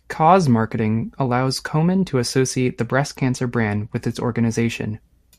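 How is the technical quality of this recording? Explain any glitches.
One glitch mars the speech. From 2.73 to 4.43 s a Bluetooth SBC bit pool drop starves upper sub-bands, dulling the treble with added grit, consistent with roughly 102 kbps; unlike plain filtering, quantisation noise rises too.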